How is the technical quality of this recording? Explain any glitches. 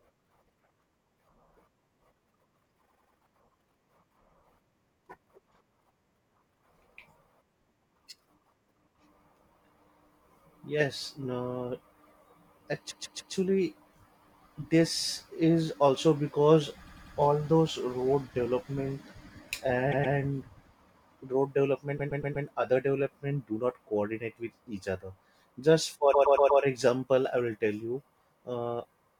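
The speech stutters six times, each a short stretch replaying back to back: 2.87 to 3.16 s, 12.90 to 13.33 s, 16.86 to 17.15 s, 19.91 to 20.15 s, 21.97 to 22.45 s and 26.13 to 26.61 s. These are repeated frames. A block of compressed frames, 96 to 144 ms long, was delivered more than once, so the decoder played it two to four extra times. Each stutter lengthens the audio by 240 to 480 ms.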